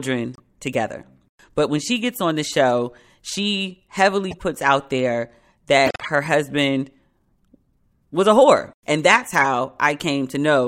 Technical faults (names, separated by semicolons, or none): corrupt frame decoded